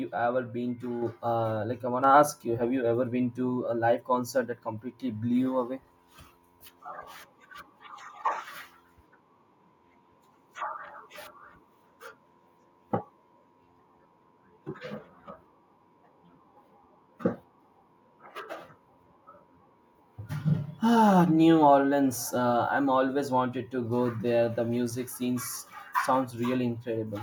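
In speech, the level jumps up abruptly twice, at 1.02 s by about 5 dB and at 2.04 s by about 4 dB, with voice and background rising together. That is the microphone volume stepped up: call software judged the input too quiet and raised the device gain in single steps.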